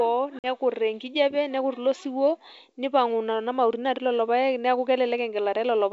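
A speech clip carried over G.722 wideband at 64 kbit/s, with one stretch of packet loss on the ADPCM call around 0.39 to 0.47 s: about 50 ms of audio drops to a hard-edged silence. As "enkijape nekut ilo siwuo" comes back, the decoder's predictor and step size are briefly out of step, leaving the speech slightly distorted before things settle.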